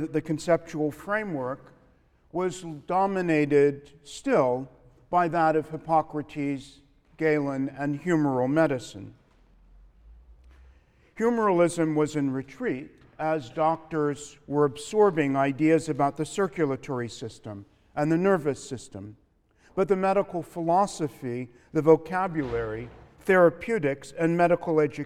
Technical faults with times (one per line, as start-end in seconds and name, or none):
none